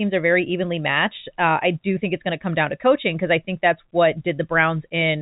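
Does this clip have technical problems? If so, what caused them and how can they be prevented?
No, nothing in this speech clip stood out as a technical problem on listening.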